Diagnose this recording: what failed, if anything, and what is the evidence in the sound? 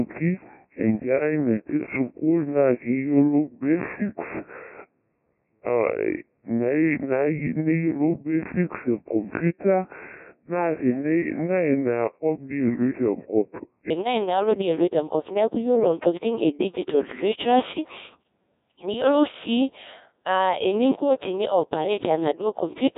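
The codec stage failed throughout: the speech is robotic and buzzy, with heavy Codec 2 vocoder damage, which fits a 1.6 kbit/s mode. Only pitch, voicing, energy and a spectral envelope survive, and the decoder rebuilds the voice from sine waves, discarding the original waveform.

From 0.0 to 13.9 s there is a section at the wrong speed: the speech runs at 0.716 times normal, slow and dragged, with pitch about five semitones low. This is likely a playback or editing stage applying the wrong clock.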